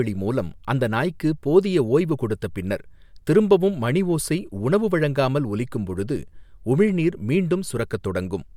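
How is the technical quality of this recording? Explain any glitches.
No technical faults can be heard in this speech recording. There are no glitches to explain.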